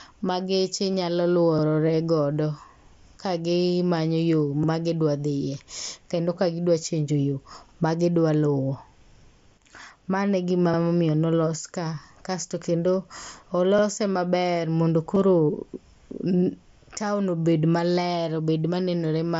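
Bluetooth headset packets were dropped between headset and phone at 0.92 s and 2.37 s, each gap about 15 ms, which fits two lost frames. The receiver filled each one with a copied stretch of recent waveform. At 4.64 s and 10.74 s, overlapping chunks appear: each processing chunk began before the previous one ended, so about 50 ms of audio plays twice at the join, heard as a brief stutter. Concealed Bluetooth headset packet loss then returns at 15.15 s, again about 15 ms, and at 17.90 s, where roughly 7.5 ms points to a single lost frame. All four occur over the mSBC codec's light graininess.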